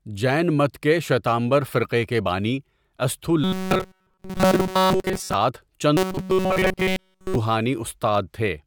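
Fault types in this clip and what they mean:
Robotic sound from repeated short buffers: the likely cause is audio data reaching playback too seldom, so the last fragment, about 5.3 ms long, is looped in place of fresh sound. That loop imposes a fixed 188 Hz buzz, turning the speech into a stiff, metallic drone that only loosely tracks the talking. It affects most of the stretch from 3.44 to 5.34 s and all of the stretch from 5.97 to 7.36 s.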